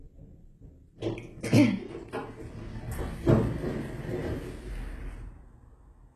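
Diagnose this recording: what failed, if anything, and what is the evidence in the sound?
The codec stage failed, throughout the clip. Damage is plainly audible. The treble has a gritty, metallic quality and stops dead above 12.3 kHz. This is likely HE-AAC compression at a bitrate near 16 kbps. Treble is rebuilt from copied lower bands, so its harmonics misalign.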